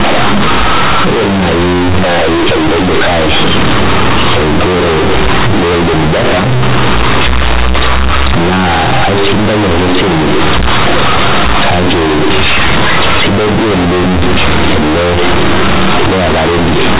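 Loud, harsh buzzing distortion runs through the whole clip, with heavy noise filling the pauses. This is companded audio read as linear: mu-law bytes were played as plain 8-bit samples without expansion.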